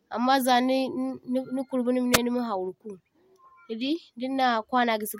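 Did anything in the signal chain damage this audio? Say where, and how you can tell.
Yes. A wireless microphone squelch dropout hits the radio link ahead of the converter, from 2.12 to 2.18 s. The speech gives way to a short rise of hiss as the FM carrier weakens, then the receiver's squelch gates the output to near silence for about 3.4 ms before the signal recovers. That hiss leading into the hole is what separates it from a buffer underrun or packet loss. Those cut out abruptly, with no static building beforehand.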